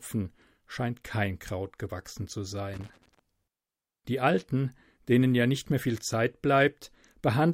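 A speech recording with one fault. Right after "gewachsen zu", from 2.74 to 3.19 s, there is loose connector crackle. It is an irregular burst of scratching and crackle lasting about half a second. The cause is a worn or dirty contact somewhere in the cable path. As it shifts, the connection makes and breaks in rapid succession. That chops the signal into fragments, and any DC on the line turns each break into a pop.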